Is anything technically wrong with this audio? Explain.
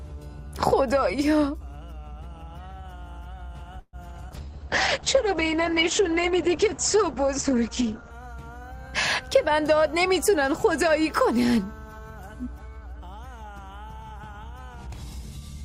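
Yes, there are four faults. From 3.79 to 3.96 s there is a call audio freeze: the last sound is stretched into a fading buzz that ends in about 50 ms of silence, likely because delayed packets left the jitter buffer empty, adding a 137 ms gap. From 4.29 to 4.34 s, short concealed packet loss leaves a brief smear where about 40 ms of audio never arrived and was covered by extrapolation from the preceding sound. From 4.30 to 8.21 s a call bitrate drop takes the encoder from 48 to 9 kbps and narrows the bandwidth from 20 kHz to 8 kHz, so the sound turns muffled and rough. From 9.19 to 11.06 s a jitter buffer speed-up plays the audio about 8% fast at unchanged pitch, trimming roughly 150 ms to shrink excess buffered delay, so it sounds hurried.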